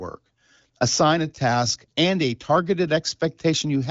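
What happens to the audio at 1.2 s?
Nothing goes wrong at 1.2 s: the speech there comes through intact, carried by the AMR wideband (HD Voice) codec at 18.25 kbit/s, with the band ending below about 7.5 kHz.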